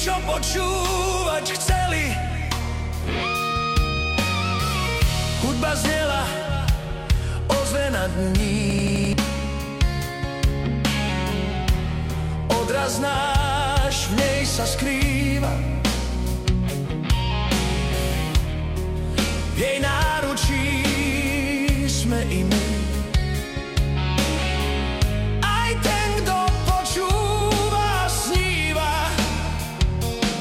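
A system hang loop runs from 8.70 to 9.13 s. The same 85.33 ms fragment of sound repeats exactly five times at about 11.7 Hz and gives a machine-gun stutter. The loop length fits a 4096-sample buffer that the audio hardware kept cycling while the system froze, and roughly 0.4 s of real audio is lost. On a waveform the identical segments sit side by side. A spectrogram shows the same block stamped repeatedly, with vertical seams every 85 ms.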